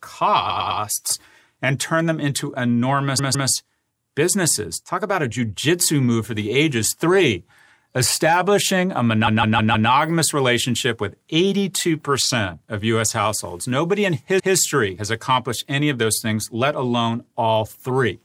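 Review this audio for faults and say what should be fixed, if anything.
A run of compressed frames was written or sent more than once, so the decoder replayed the same slice of speech and the clip grew by the repeated time. Repeated frames occur at 0.49–0.80 s (a 0.10 s block played three extra times), 3.18–3.49 s (a 0.16 s block, two extra), 9.26–9.89 s (0.16 s, four extra) and 14.38–14.54 s (0.16 s, one extra). Each is heard as a stutter. Add sequence checks in the write and transmit path so duplicated frames are dropped before decoding.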